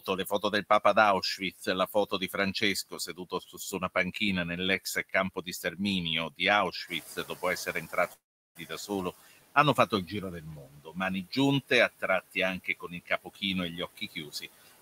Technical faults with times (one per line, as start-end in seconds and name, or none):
0.00-14.82 noise suppressor artifacts
0.00-0.53 speech cut by the noise suppressor
1.38-4.15 speech cut by the noise suppressor
4.85-14.82 speech cut by the noise suppressor
6.87-9.12 noise suppressor catching up
8.13-8.57 long network dropout